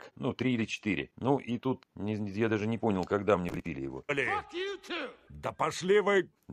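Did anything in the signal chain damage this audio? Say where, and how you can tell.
Yes. The driver or buffer stage shows processor overload crackle from 3.49 to 3.66 s. Over that stretch the processor repeatedly missed its deadlines for buffers of roughly 5 ms each, and each missed buffer was skipped, leaving hard-edged gaps that are heard as a burst of crackle that stops once the load passes.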